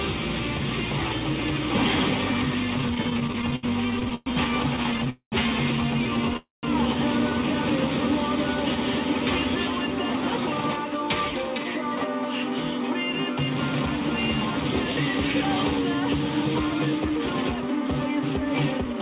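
From 2.78 to 5.08 s there's a run of repeated stalls (stutter): the jitter buffer kept running dry, so the receiver stretched the last sound across 25 small gaps, the longest 114 ms. The audio drags and hiccups.

Right after, at 5.10 to 5.34 s and again at 6.37 to 6.65 s, come two call audio freezes, likely from packets held up in transit. The sound is stretched into a fading buzz or hiss, then drops to silence for 80 ms and 150 ms, before picking up where it stopped.

From 10.21 to 13.27 s and 14.60 to 18.94 s, the jitter buffer speed-up trims tiny pitch-period slices to shed built-up delay. It runs about 3% fast at the same pitch, losing about a tenth of a second and then about 150 ms.

Throughout, nothing reaches above 4 kHz, which fits a G.711 call codec.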